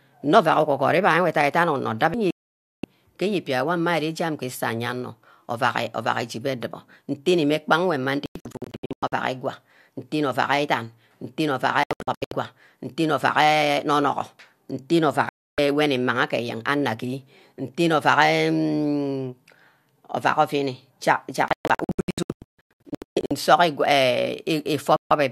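A speech clip with repeated digital broadcast dropouts: the receiver lost good frames and muted at 2.31, 8.26, 11.83, 15.29, 21.48 and 24.96 s. The ones at 8.26, 11.83 and 21.48 s break into scattered short holes rather than one clean gap. The hole at 21.48 s is the worst, with about 1.3 s gone across nearly 1.8 s. The gap lengths fit whole 24 ms frames being dropped.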